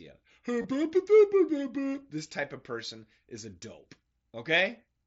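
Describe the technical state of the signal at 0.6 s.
Concealed Bluetooth headset packet loss, 0.62 to 0.64 s: about 22 ms is patched with a repeat of recent waveform, a brief buzzy hold instead of the silent gap of a plain dropout.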